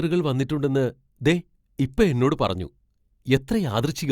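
No technical faults can be heard anywhere in the speech.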